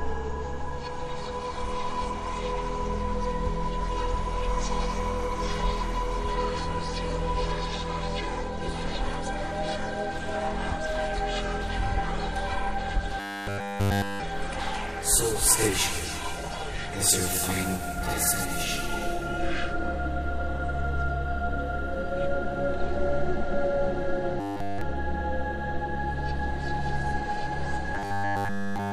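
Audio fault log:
13.2–14.22 s, 24.40–24.81 s, 27.95–28.93 s: robotic sound from repeated short buffers. The sound collapses into a rigid metallic buzz at 100 Hz, likely because nearly every bit of it comes from one 10 ms chunk looped over and over while fresh audio is skipped.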